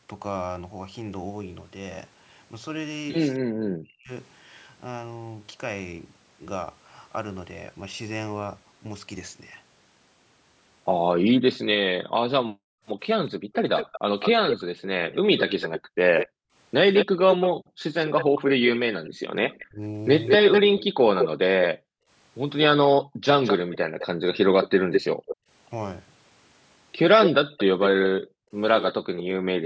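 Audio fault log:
3.42 to 4.11 s and 19.66 to 20.65 s, speech suppressed in double talk: both sides were talking at once, and the echo canceller likely could not tell the local talker apart from the far-end sound in its loudspeaker, so it turned everything down. The speech sinks by roughly 40 dB, losing its brightness or breaking into fragments, for around 0.7 s in the first spell and about 0.3 s in the second, then recovers.
11.17 to 29.65 s, background gated by the echo canceller: whenever the loudspeaker carried far-end sound, the canceller clamped the microphone hard, by as much as about 40 dB. The room tone drops away abruptly and then returns once the canceller releases. Across this stretch these dropouts add up to roughly 4 s of missing background, which gives the ambience a switched, pumping quality instead of a steady floor.
13.29 to 29.23 s, echo leak: at the loudspeaker end, the echo canceller likely failed to remove all of what its microphone picked up, and the remainder was sent back down the line. 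A second copy of the speech trails the original by 205 ms, only a few dB quieter than the direct sound. Because it is so loud, it comes across as a distinct, slapback-like double rather than a faint tail.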